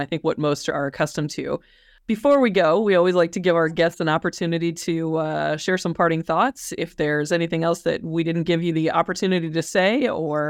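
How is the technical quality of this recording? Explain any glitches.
The recording has one clear glitch: a short burst of hard clipping in the speech from 2.31 to 2.60 s. For those few tenths of a second the level runs about 2 dB past what the signal path can hold, so the waveform's peaks are sheared off flat. The flat tops add high harmonics, heard as a brief gritty crackle on the loudest moments. Soft saturation would sound rounder and warmer, whereas this edge is abrupt and brittle and stops the instant the level drops back.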